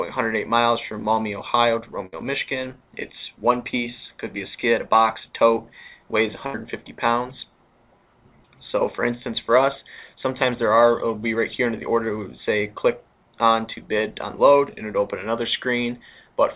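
Two bursts of packet loss, at 2.06 to 2.14 s and 6.46 to 6.56 s, hold the last sound and fade it over about 64 and 72 ms before the audio resumes further on. A spectrogram shows smeared, decaying stripes beneath the call path's 4 kHz ceiling.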